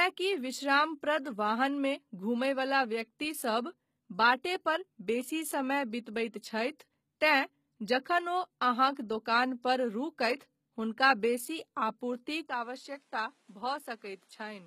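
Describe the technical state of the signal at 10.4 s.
A pre-echo sits at 10.38 to 10.41 s, just before "हुनका बेसी". The codec spread its quantisation noise across the whole transform block, so noise meant for the loud onset also fills the quiet stretch before it. The result is a brief hiss of about 22 ms ahead of the attack, and the attack itself sounds softened. On a spectrogram this shows as a broadband smear leading into the onset. On the waveform, low-level noise appears before the attack rises.

Underneath, the whole passage carries plainly audible damage from low-bitrate coding, likely HE-AAC v2 at a rate that fits about 20 kbps. The upper spectrum is rebuilt from copied lower bands rather than the original treble, so s sounds turn gritty or metallic. A spectrogram shows nothing above 14.9 kHz and repeated-looking texture in the upper band.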